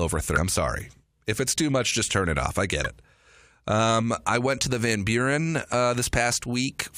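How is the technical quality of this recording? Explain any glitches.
Three brief glitches interrupt the speech. Damaged data in a compressed stream appears at 0.36–0.38 s, 2.85–2.87 s and 5.72 s. Corrupted bytes make the decoder misread frames and lose sync while it hunts for the next header, producing a short chirp or blip each time.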